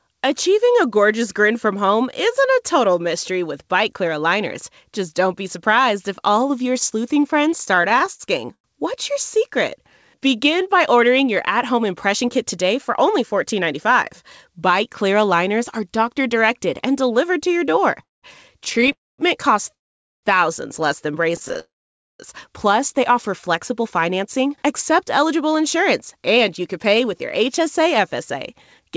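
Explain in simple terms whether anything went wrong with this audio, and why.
Several things go wrong in this speech clip, all caused by network delivery problems during a call.

Repeated stalls (stutter): From 7.58 to 8.66 s the speech catches and drags through 12 brief hiccups, each 0.1 s or less. Packets of audio kept arriving late, so the receiver ran out of sound and briefly stretched the last bit until more arrived. Nothing is lost, but the flow stutters. The same happens from 18.03 to 21.57 s, with 15 hiccups of up to 0.2 s.

Call audio freeze: Within and just after that second stretch the sound stops outright, at 18.92 to 19.20 s, 19.74 to 20.25 s and 21.59 to 22.21 s. Each pause is mostly silence lasting about a quarter to six tenths of a second. The likely cause is packets being held up long enough that the receiver's small reserve of audio, its jitter buffer, emptied completely. 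The speech then resumes where it stopped, so a pause is inserted but nothing is skipped.

Jitter buffer slow-down: From 9.82 to 10.46 s the speech runs at about 93% of normal speed at the same pitch, sounding slightly drawn out. The receiver repeated tiny slices of sound to rebuild its reserve, adding about 53 ms.

Jitter buffer speed-up: From 12.53 to 13.92 s the speech runs about 3% fast at the same pitch. From 23.83 to 28.91 s it runs about 4% fast. In both places the receiver had stored up too much audio and trimmed tiny pieces to cut the delay, removing about 50 ms the first time and about 0.2 s the second.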